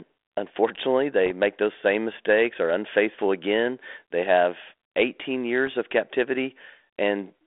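Bits flipped on the ADPCM link at 1.26 to 1.30 s, 3.18 to 3.22 s and 5.67 s are bit errors on an ADPCM link. Each corrupted code knocks the decoder's step size and predictor off track, so the fault rings on briefly instead of staying a single-sample slip. The speech gets a pop and a short rough burst with a momentary change in level. The error rate is only a fraction of a percent, and the band-limited telephone sound points to 32 kbit/s G.726.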